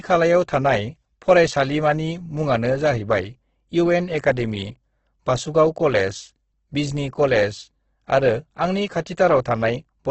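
Right from the start and across the whole clip, the speech comes through grainy and rough, with a hashy texture and nothing at all above about 8.2 kHz. That's likely Opus compression in its music-style CELT mode, squeezed hard: damage this heavy fits a bitrate down around 12 kbps, where the encoder keeps each band's energy but fills the detail with folded or noise-like content, so the tone turns coarse.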